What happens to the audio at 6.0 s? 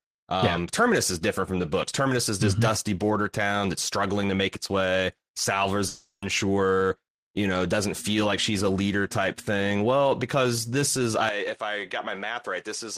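At 6.0 s the clip is inside a gap from 5.87 to 6.23 s: the last sound smears into a fading buzz, then about 90 ms of near-silence, and about 350 ms of audio never returns. This is likely a long network dropout, with the receiver concealing lost packets.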